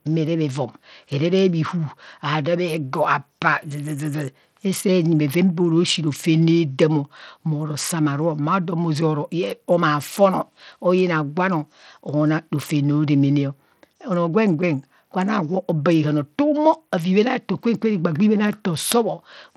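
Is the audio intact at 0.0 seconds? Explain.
No. From the very start at 0.0 s the speech carries plainly audible Bluetooth SBC compression damage, and it runs through the whole clip. The likely cause is a starved SBC link whose bit pool, which fits a rate of about 80 kbps, leaves the upper sub-bands with few or no bits while coarsely quantising the rest. The treble thins and flickers under a gritty haze. A spectrogram would show a ragged, patchy top band with smeared aliasing.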